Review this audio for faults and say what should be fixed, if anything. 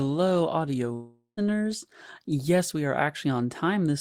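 From 0.93 to 1.39 s the speech smears into a fading buzz, goes silent for 120 ms, then resumes with 440 ms missing, likely a long network dropout. A steadier link plus a deeper jitter buffer or retransmission would prevent it.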